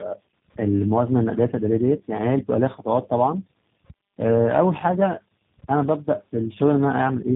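From start to finish the speech has that tandem speech coding roughness: muffled, warbly and gritty, with nothing above 3.8 kHz. It sounds like about three speech coders in a row, each re-encoding the last one's damage, ending in something like G.729A.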